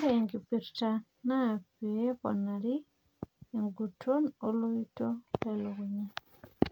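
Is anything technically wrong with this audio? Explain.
No, nothing in this recording stood out as a technical problem on listening.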